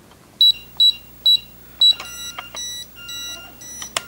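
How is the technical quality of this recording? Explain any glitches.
From 0.41 s to the end there's video or display buzz: a 59.94 Hz field-rate buzz with hash, plus a 15.7 kHz line tone, sitting somewhere around 25 dB under the sound, picked up from a screen or video cable.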